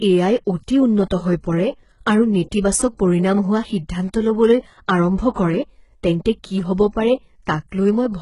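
From the first second to the end, the speech carries the signature of HE-AAC compression, likely at a very low bitrate, somewhere around 12 kbps. The treble up to its 11.1 kHz ceiling is rebuilt by copying lower bands upward, so it's bright but not real. The harmonics don't line up across the crossover, and the damage is heavy: s sounds come out gritty, lispy and metallic throughout.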